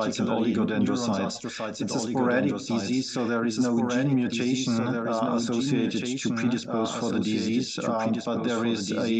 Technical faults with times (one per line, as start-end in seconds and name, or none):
0.00-9.20 doubled audio track